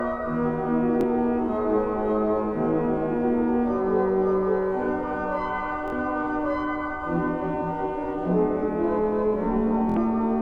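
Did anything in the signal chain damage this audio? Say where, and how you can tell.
Yes: Bluetooth stutter at 1.01–1.03 s, 5.88–5.93 s and 9.90–9.97 s, introduced on the wireless link between sender and receiver. Each event is a short slice repeated in place, about 23 ms, then 46 ms, then 70 ms, which fits one, two and three late packets. With no fresh data arriving, the receiver replays its last buffer, so the repeats build into a brief buzz. The sound then picks up further along, skipping the missing stretch.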